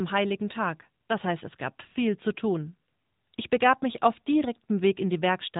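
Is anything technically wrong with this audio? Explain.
Yes. The whole clip has been through the AMR narrowband mobile codec, the old 2G/3G phone speech coder, and the damage is plainly audible. Nothing comes through above 3.8 kHz, so the speech sounds boxed-in and telephone-thin. The codec rebuilds the voice from a vocal-tract model fed by a handful of pulses per short sub-frame, and here that gives a buzzy, synthetic edge, which fits one of its mid-rate modes around 10 kbps.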